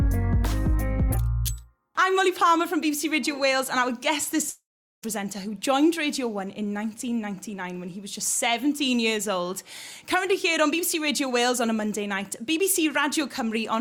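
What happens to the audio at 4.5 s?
From 4.49 to 5.04 s the sound smears into a fading buzz, then falls silent. That fits a long network dropout, likely; about 0.54 s never returns.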